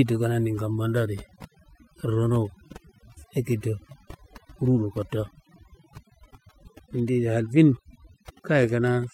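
Overdone noise removal runs throughout: an over-aggressive denoiser cuts bands near its noise estimate, leaving a near-silent background with twinkling specks.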